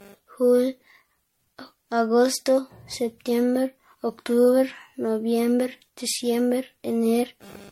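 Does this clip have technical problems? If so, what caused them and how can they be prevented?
Yes, there's generation loss the whole way through. The speech sounds swirly, hollow and smeared, attacks blur, and nothing survives above 16.5 kHz. That's likely from repeated low-bitrate MP3 encoding, around seven passes. To avoid it, keep a lossless master and encode only once, at the end.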